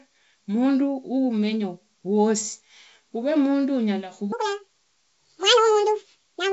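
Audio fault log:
4.32 to 6.52 s, section at the wrong speed: from 4.32 s to the end, the speech runs 1.88 times too fast, hurried and squeaky, with pitch raised by close to ten semitones. Pitch and tempo jump together at one instant, which sets it apart from a pitch-shift effect that would keep the timing intact. The likely cause is this stretch being played against the wrong clock. The G.722 wideband band limit near 7.7 kHz stays unchanged throughout.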